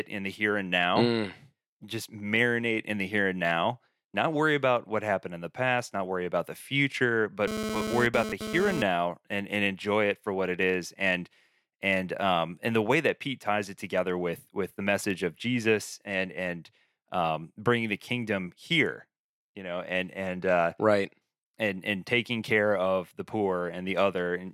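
From 7.48 to 8.82 s, after "worry about the future", GSM phone buzz rasps at 217 Hz from rectified radio bursts, about 4 dB under the speech, drawing stacked harmonic stripes on a spectrogram.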